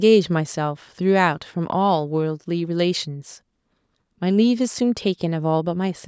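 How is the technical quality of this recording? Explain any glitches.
No glitches or technical faults can be heard in this speech recording. It has been through a call's microphone processing, which removes the deepest bass and leaves nothing above 8 kHz, as that processing normally does.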